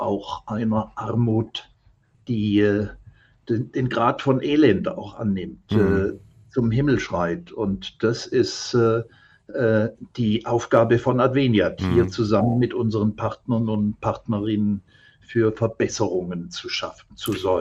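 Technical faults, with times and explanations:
0.11 to 17.59 s, clock slip clicks: a fast, even tick runs through the sound about every 20 ms, hundreds in all, heard as a soft rattle. Two unsynchronised clocks, likely about 0.1 percent apart, force a sample to be skipped or doubled at each slip.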